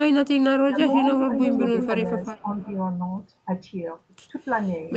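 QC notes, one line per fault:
2.07–2.73 s, echo leak: a faint delayed copy of the speech sits under the direct signal, trailing it by about 381 ms and roughly 15 dB quieter. It sounds detached rather than roomy, like the same voice repeating behind itself. The likely cause is a far-end loudspeaker whose echo canceller failed to fully subtract what its microphone picked up, so the residue was returned down the line. It is audible only across this stretch.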